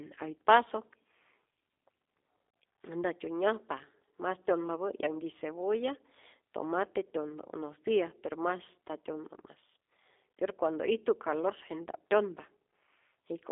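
From start to finish the speech is carried through the G.729 codec, the G.729A variant, and the damage is plainly audible. The audio is squeezed into a telephone band of about 300 Hz to 3.6 kHz with nothing above 3.7 kHz, so it sounds boxy and thin. At 8 kbit/s the codec rebuilds each frame from a vocal tract filter, a pitch guess and a few pulses, which leaves the voice slightly rough and synthetic-sounding.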